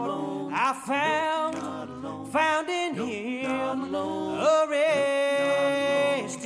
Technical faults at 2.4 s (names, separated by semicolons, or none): none